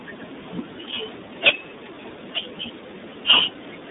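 The speech has been passed through the iLBC codec for its whole length, a narrowband VoIP coder that handles each frame's excitation independently, here in what sounds like 30 ms frames, which fits its 13.33 kbps mode. The result is telephone-band sound running from about 200 Hz to 3.7 kHz, with nothing above 3.8 kHz, so the voice is muffled and thin, and plainly audible codec damage leaves it rough and slightly synthetic.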